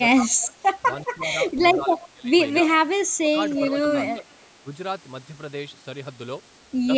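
The voice keeps getting pushed down in short bursts at 0.16–0.64 s, 1.16–1.35 s, 1.78–2.37 s, 2.63–2.74 s and 3.14–3.35 s. The dips range from slight to about 20 dB at the deepest. That's likely speech suppressed in double talk: with both ends talking at once, the echo canceller couldn't tell this talker apart from the loudspeaker echo and turned the whole lot down.

From 3.56 to 4.09 s there's an echo leak. A copy of the voice comes back about 349 ms late and sits roughly 10 dB under the direct sound, likely because the canceller didn't scrub everything its mic picked up off the loudspeaker.

The ducking then returns at 4.15–4.29 s and 4.62–4.70 s, both around 10 dB deep.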